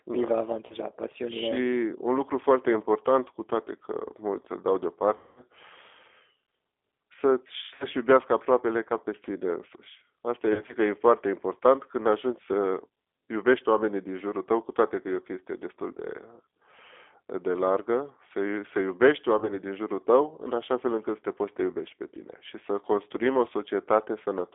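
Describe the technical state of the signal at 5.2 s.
At 5.2 s you're inside a VoIP packet loss concealed by the speech codec, from 5.17 to 5.43 s, right after "mulți îl dau". The decoder stretches the last pitch and filter into a buzzy tone or coloured noise that fades across a roughly 200 ms gap, which fits about ten 20 ms packets. All of this passes through the G.729 codec, at 8 kbit/s, so the band is cut to about 300 Hz to 3.6 kHz and the pulse-built speech sounds noticeably rough and synthetic.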